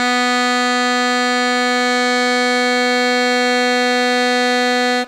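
No technical faults can be heard at any point in the music.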